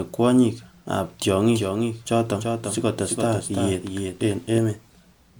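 From start to finish the speech has a swirly, smeared and hollow quality, with consonant attacks softened and nothing present above 20.1 kHz. That is more degradation than a single encode at this quality would leave, which points to generation loss, likely from the audio being decoded and re-encoded as MP3 around three times at roughly 130 kbit/s. Each pass quantised on a shifted frame grid, so the noise and spectral gaps stacked up.

From 1.54 s to 4.58 s a second, full-band copy of the speech trails the first by roughly 0.3 s, about 5 dB quieter. It is dry, with no decay or room colour, and it cuts in and out abruptly at those two points rather than fading like a reflection. This is a doubled audio track, likely from a slower parallel capture path or an edit that left two out-of-step copies layered together.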